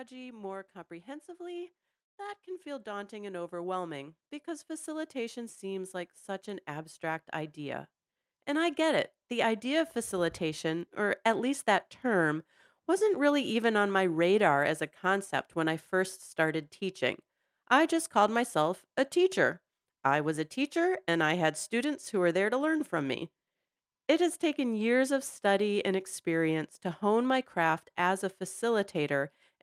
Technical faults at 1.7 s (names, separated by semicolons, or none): automatic gain rising